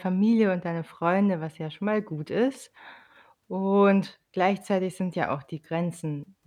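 No technical faults are audible.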